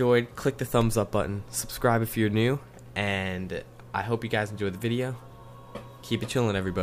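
Right near the start, at about 0.81 s, there's an electrical switching spike: a short, sharp click sitting on top of the sound, peaking fairly low, somewhere around -25 dBFS. It's likely a nearby switch, motor or static discharge arcing briefly and getting picked up by the audio line.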